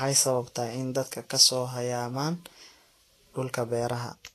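Across the whole recording the speech sounds hissy and grainy. The upper range has a rough, noisy sheen, consonant attacks are smeared, and nothing is heard above about 14.2 kHz. This is most likely Vorbis compression at a low setting; the plainly audible damage fits a bitrate around 35 kbps. The codec keeps a smooth spectral outline but quantises the treble so coarsely that fine detail collapses into noise of similar energy.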